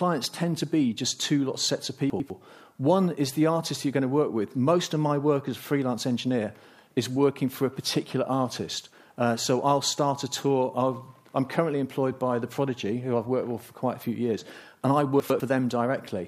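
A brief jumbled moment occurs at 2.1 to 2.3 s and again at 15.2 to 15.4 s. These are chunks out of order. In each, a 100 ms chunk came one chunk late and plays after the one meant to follow it, which leaves three hard joins.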